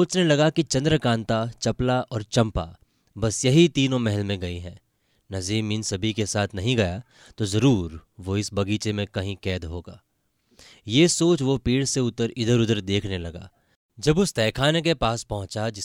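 Nothing goes wrong anywhere in this bit of speech, so there's no technical fault to point to at any moment.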